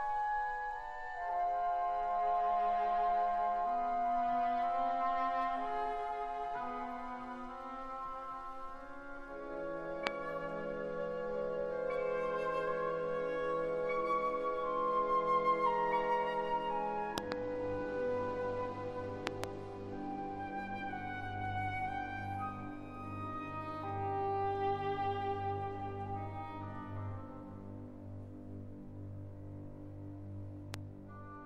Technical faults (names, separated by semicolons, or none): loud pop